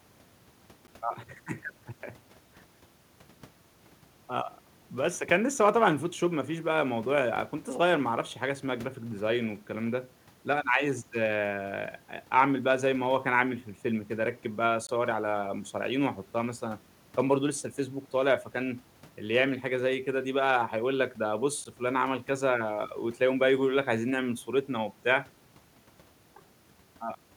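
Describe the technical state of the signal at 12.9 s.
At 12.9 s the speech signal is intact, with no audible fault at that moment.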